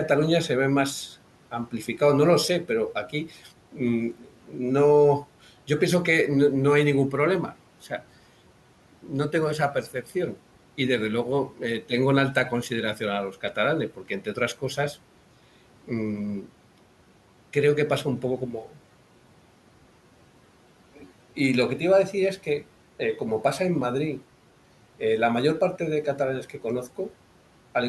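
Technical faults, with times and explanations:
2.68–4.59 s, 9.03–10.38 s, 11.5–14.96 s and 15.87–16.5 s, speech cut by the noise suppressor: the suppressor misread stretches of speech as background and turned them down with the room noise, which sits about 24 dB below the speech. Each stretch loses about 10 to 12 dB over brief moments, from roughly a tenth of a second up to under half a second in total, so soft consonants and word endings there sound swallowed and faint.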